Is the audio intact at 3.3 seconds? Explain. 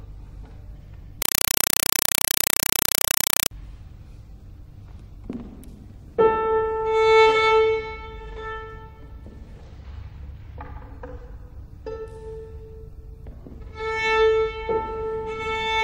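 No. At 3.3 s the sound is a compressed stream played as audio, running from 1.22 to 3.51 s. A Dolby Digital stream, which fits 192 kbps AC-3, reaches the output undecoded. Each 4 ms noise burst and its silent padding repeat 31.25 times a second, producing very loud, chattering static.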